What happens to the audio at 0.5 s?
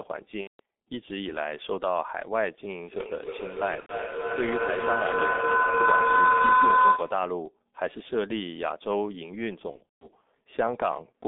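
At 0.5 s the audio falls into a gap concealed by the speech codec after VoIP packet loss. It runs from about 0.41 s to 0.60 s, roughly 180 ms, which fits six lost 30 ms frames. With no new data, the decoder keeps repeating its last pitch and filter settings while lowering the gain each frame. The speech smears into a fading buzzy tone or coloured noise. Because each frame builds on the previous one, the sound stays weak or distorted briefly after the gap ends.

Under this gap, and across the whole clip, is heavy G.723.1 codec damage. Its very low rate points to about 6.3 kbit/s. The line band runs from about 200 Hz to 3.6 kHz, so nothing higher survives. The codec's voice model updates slowly over 30 ms frames. The speech sounds muffled and hoarse, and consonants blur together.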